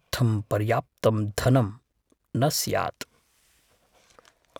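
No technical faults can be heard in this recording.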